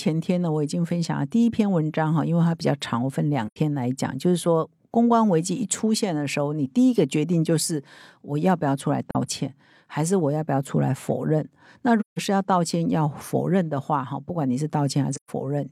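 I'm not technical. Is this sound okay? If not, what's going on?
No. The speech drops out briefly four times, at about 3.47, 9.11, 12.0 and 15.13 seconds. This is AAC frame loss with muting. Small chunks of data went missing. The player filled each gap with silence, fading out and back in smoothly.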